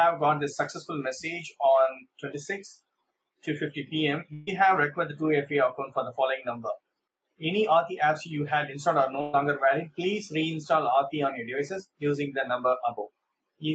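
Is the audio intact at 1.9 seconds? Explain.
Yes, the audio is intact at 1.9 s: no dropout, click or distortion interrupts it there, and what can be heard is just the ordinary band-limited sound of a call, with nothing above about 8 kHz.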